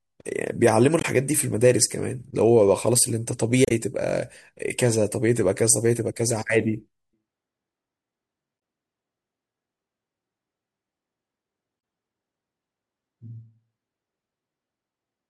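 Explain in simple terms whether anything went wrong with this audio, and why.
Something did go wrong, four times, from damaged data in a compressed stream. Brief glitches break into the speech at 0.99 to 1.05 s, 3.65 to 3.72 s, 8.56 to 8.58 s and 11.77 to 11.80 s. Each lasts well under a tenth of a second. They sound like a quick chirp or blip. Part of the compressed file was spoiled there. The player could not read that stretch properly and had to find its place again.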